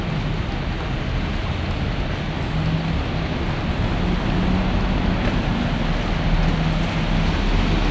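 From start to end the audio runs at two-thirds speed and about 7 semitones low, a wrong sample rate fault. It sounds like 24 kHz material played at 16 kHz without conversion.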